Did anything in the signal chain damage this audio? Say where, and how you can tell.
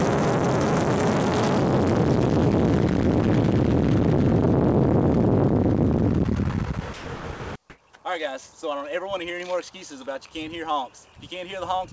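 Yes, in call processing. Sound dropped by the voice detector at 6.94–7.06, 7.16–7.24 and 7.34–7.40 s gives way to steady noise, likely gating, not packet-loss clicks.

Comfort noise in place of the background fills 7.70–7.78 s: detailed background becomes featureless hiss, shifting about 19 dB, likely discontinuous transmission, not a dropout.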